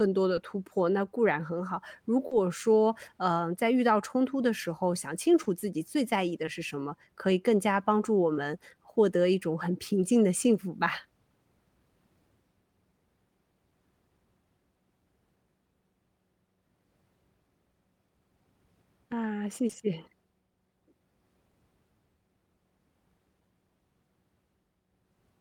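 Speech with short concealed packet loss at 0.35–0.39, 2.27–2.33, 5.43–5.47, 6.45–6.49, 8.33–8.37 and 19.67–19.75 s. Audio arrived too late to decode. Each gap of 20 to 40 ms is filled by extending the preceding sound, leaving a brief smear.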